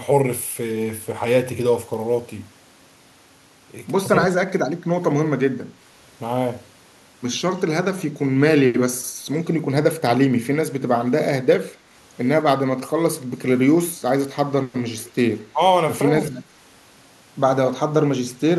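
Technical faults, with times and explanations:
4.34–4.49 s and 15.53–15.6 s, speech suppressed in double talk: the speech dips by about 20 dB for 150 ms, then about 10 dB for 70 ms. This is likely the echo canceller ducking everything while both ends talked at once.
11.73, 14.99–15.1 and 16.22–16.41 s, echo leak: a faint copy of the speech returns 217–218 ms late, at about 35, 30, then 20 dB below the speech. That is likely loudspeaker pickup the far-end canceller didn't fully remove.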